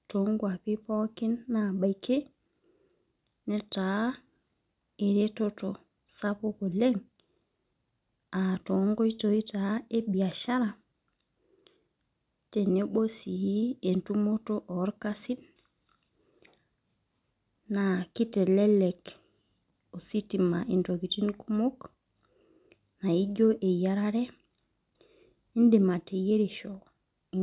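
Listening to this speech recording, nothing stood out as a technical problem at any point.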